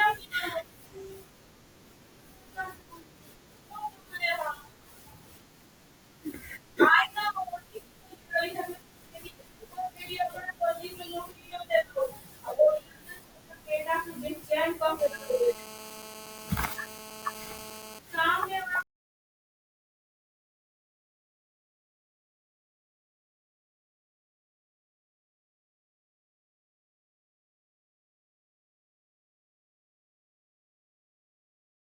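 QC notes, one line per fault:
14.99–17.99 s, GSM phone buzz: a 2G handset close to the recording chain was in a call, transmitting in radio bursts at 216.7 Hz, and the audio circuitry rectified those pulses into the signal path. For these three seconds the speech carries a hard, raspy buzz at that rate, rich in harmonics and unrelated to the speech, sitting about 15 dB below it and holding steady until it stops.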